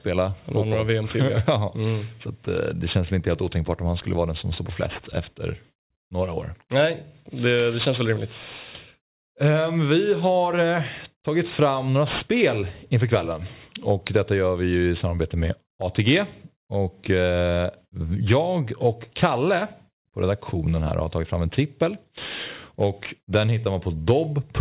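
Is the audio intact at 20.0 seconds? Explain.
No. Aliasing runs through the whole clip, including 20.0 s. The sound points to a drop to an 8 kHz rate with no anti-aliasing filter, so content above 4 kHz folds back as gritty, metallic sibilants roughly 20 dB down. A spectrogram shows energy packed hard up to a 4 kHz ceiling, with mirrored traces.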